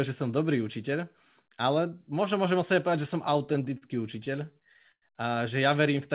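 From 3.34 to 5.04 s, just after "sebe povedať že som", late packets repeatedly drain the jitter buffer, producing repeated stalls (stutter): fourteen brief stretched holds, the longest 100 ms, so the speech drags.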